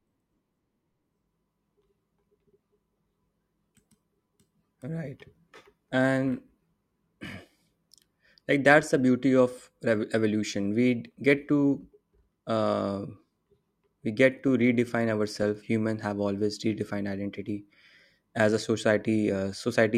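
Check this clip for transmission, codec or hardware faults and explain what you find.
Nothing in the speech points to a transmission, codec or hardware problem. There is no event to locate or explain.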